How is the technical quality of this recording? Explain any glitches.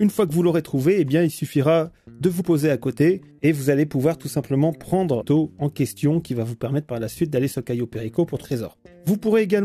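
Three short glitches mar the recording, all from damaged data in a compressed stream, at 2.39 to 2.41 s, 5.20 to 5.22 s and 8.43 s. At each point some bytes of the encoded stream were corrupted, so the decoder either misread those frames or discarded them, lost sync, and had to hunt for the next valid frame header before resuming. Each event lasts only about 20 ms or less and is heard as a brief chirp or blip that breaks into the sound.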